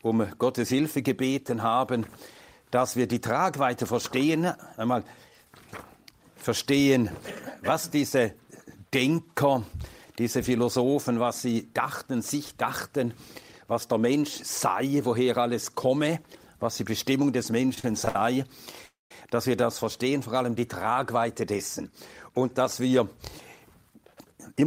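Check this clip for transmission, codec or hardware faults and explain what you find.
Three transmission faults appear late in the clip: a stutter, a freeze and two speed-ups.

Repeated stalls (stutter) run from 17.74 to 18.16 s. Packets arrived late, so the jitter buffer kept emptying. Four short gaps, the longest 63 ms, were filled by continuing the previous sound. The audio drags and stutters.

At 18.86 to 19.11 s the sound stops and holds for about 0.25 s, fading to silence for 160 ms before resuming. This is a call audio freeze, likely from packets held up in transit.

Jitter buffer speed-up occurs from 20.90 to 23.00 s at 106% and from 23.82 to 24.62 s at 111%. The buffer had built up excess delay. Short pitch-period slices were cut out, roughly 150 ms and 100 ms, so the audio sounds hurried at unchanged pitch.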